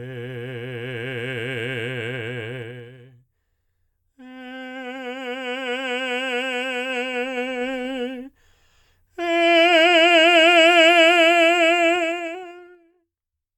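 Music, with zipper noise in three places. The level moves in unsmoothed 2 dB steps, and each step clicks. It falls about 10 dB at 2.58–2.98 s and rises about 10 dB, more slowly, at 6.78–7.88 s. It drops about 25 dB at 11.92–12.94 s with rapid zipping.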